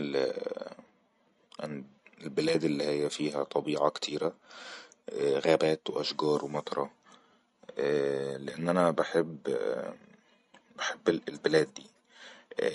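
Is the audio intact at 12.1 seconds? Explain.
No. At 12.1 seconds, as throughout the speech, the sound is watery and swirly, with nothing above 11.2 kHz, which points to MP3 compression at a low bitrate near 48 kbps as the likely cause. Weak frequency lines flicker between frames, which a plain low-pass filter would not do.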